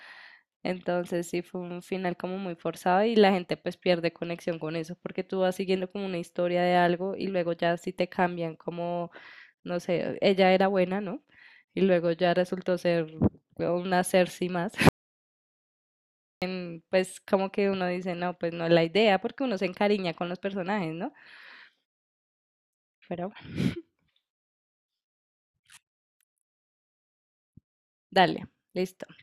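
An audio dropout to silence hits this speech clip from 14.89 to 16.42 s, a gap of about 1.53 s where the sound stops mid-flow and falls to silence with no room tone. The input was likely lost while recording continued writing silence, so that stretch is gone.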